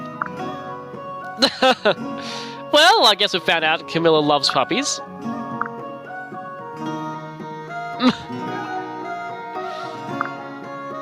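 Gain pumping runs throughout: the gain swings around 15 dB, pulling down under each loud sound, leaving the dynamics squashed. The likely cause is gain set far too high feeding a fast limiter.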